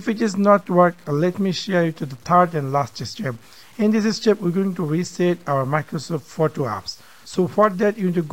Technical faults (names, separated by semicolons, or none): low bit depth without dither